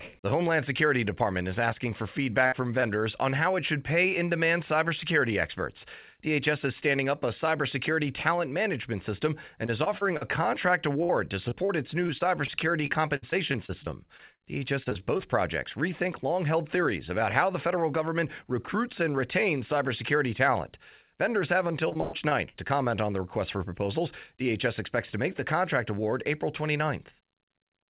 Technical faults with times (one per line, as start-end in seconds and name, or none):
2.46-2.54 burst of packet loss
2.80-2.84 short concealed packet loss
9.66-10.23 repeated packet loss (robotic sound)
11.03-15.21 repeated packet loss (robotic sound)
21.89-22.71 repeated packet loss (robotic sound)